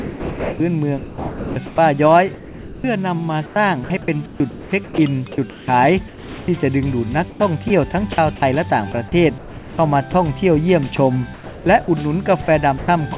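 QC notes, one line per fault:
0.00–1.78 s, sound chopped by the voice detector: about 1.3 s of quiet edges swap in and out with synthetic hiss, likely repeated detector switching, unlike a single clean dropout.
2.34–2.84 s, sound dropped by the voice detector: sound stops for 0.5 s and steady noise fills the gap, losing about 0.29 s of real content before it resumes.
3.46–4.98 s, sound chopped by the voice detector: about 0.72 s of the stretch is replaced by fill, choppy rather than one continuous gap.
5.50–6.48 s, comfort noise in place of the background: the textured background turns into featureless, even noise for about 0.58 s between sounds, with no sound content cut away.
6.08–6.48 s, sound dropped by the voice detector: overlapping that filled pause, 0.4 s of sound gives way to steady noise, with about 0.21 s of real content missing.
7.30–10.14 s, sound chopped by the voice detector: across nearly 3 s, about 0.68 s of quiet parts are replaced piecemeal.
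10.96–11.88 s, sound chopped by the voice detector: about 0.38 s of soft edges are clipped to hiss in short bursts, intermittent rather than a sustained gap.
12.42 s to end, sound chopped by the voice detector: brief fills totalling about 0.18 s nick the closing sound, against band-limited audio with nothing above 4 kHz.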